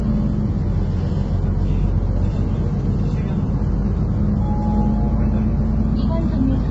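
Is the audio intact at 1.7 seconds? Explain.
No. At 1.7 s, as through the whole clip, the sound is grainy and rough, with noise filling the gaps between tonal components and nothing above about 7.8 kHz. This points to heavy low-delay AAC compression, likely AAC-ELD near 16 kbps, whose short frames resolve fine spectral detail poorly.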